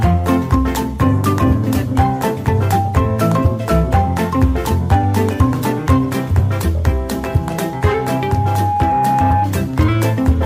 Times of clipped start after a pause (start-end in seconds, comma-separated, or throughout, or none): none